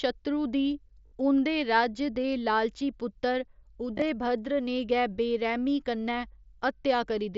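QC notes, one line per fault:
1.07–1.12 s, concealed Bluetooth headset packet loss: about 52.5 ms of audio never arrived from the headset, and the phone filled the hole by looping the best-matching recent stretch of waveform. The result is a short buzzy, steady tone at full level with a slight warble as real audio resumes. Unlike a dropout, there is no silence, and unlike a click, it is tonal. The span fits roughly seven lost frames.
3.97–4.02 s, concealed Bluetooth headset packet loss: losses totalling about 37.5 ms are scattered across 60 ms, with the longest run only 15 ms. Through the mSBC link the band stays wideband up to 8 kHz, so the damage reads as repetition rather than muffling.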